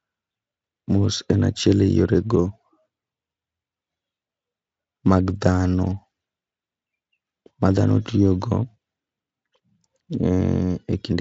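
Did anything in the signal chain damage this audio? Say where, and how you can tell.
No, nothing stood out on listening that would point to damage at any stage of the chain.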